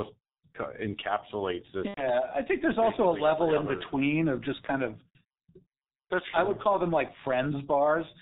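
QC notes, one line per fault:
Throughout: G.723.1 codec. The whole clip has that early internet-phone sound, with nothing above 4 kHz, so speech comes across muffled and hoarse and the consonants smear together. The damage is heavy, and the rough, thin texture fits the 6.3 kbit/s mode. The codec works in 30 ms frames and updates its model of the voice slowly, so quick changes in the sound get blurred instead of tracked.
1.88 to 2.11 s: VoIP packet loss concealed by the speech codec. Right after "encapsulates this", about 90 ms of audio drops out, which fits three lost 30 ms frames. The decoder fills the gap by extending its last pitch and filter settings at falling gain, so you get a stretched, fading buzz or coloured noise that is muted by the third lost frame. Each frame builds on the previous one, so the sound stays weak and warped for a little while after packets return, up to around "I think there's also".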